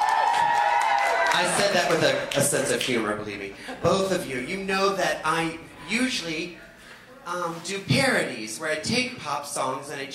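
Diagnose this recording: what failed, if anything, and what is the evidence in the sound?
No faults detected.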